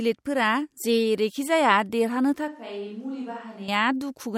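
From 2.48 s to 3.68 s the speech abruptly turns roomy, hollow and thin in the bass, dropping about 10 dB, with faint room noise far beneath it. This is a switch to a distant microphone, likely because the close microphone's feed failed. It returns just as suddenly.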